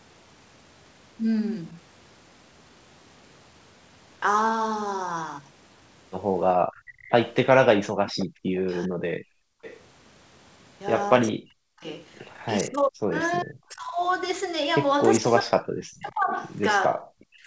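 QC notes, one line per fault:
6.74–8.61 s, 9.63–9.79 s, 11.28–11.32 s and 15.96–16.13 s, echo leak: a faint delayed copy of the speech trails the original by 400 ms, at about 15 dB below the speech in the first and third spots, about 20 dB below in the second and about 30 dB below in the last. This is likely the far end's echo canceller passing on part of what its loudspeaker fed into its microphone. On a spectrogram the harmonic pattern repeats, weaker, shifted 0.4 s to the right.
6.82–8.37 s, background gated by the echo canceller: the room tone drops by as much as about 37 dB in short holes adding up to roughly half a second, then comes back. The canceller clamped the microphone hard while its loudspeaker played and let go afterwards. The waveform's noise floor falls to near silence in those gaps, and the spectrogram shows matching vertical dark bands across the background.
8.65–9.45 s, 11.32–13.98 s and 15.19 s to the end, speech suppressed in double talk: the speech dips, thins or breaks off in pieces, by around 40 dB at worst. 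The affected time adds up to roughly half a second in the first span and around a second and a half in the second. The likely cause is both sides talking at once, so the canceller turned down its own talker along with the echo. The waveform envelope shows abrupt notches, and the spectrogram shows the upper harmonics weakening.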